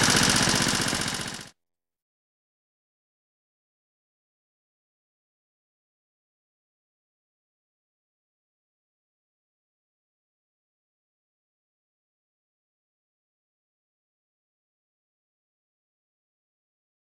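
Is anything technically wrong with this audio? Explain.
Yes. A block size mismatch (padded) runs throughout: each written block falls short of the read size, which fits a 512-sample buffer, and zeros fill the rest. The gaps produce an 86.1 Hz buzz and 0.938× speed at normal pitch. Waveform and spectrogram show evenly spaced gaps.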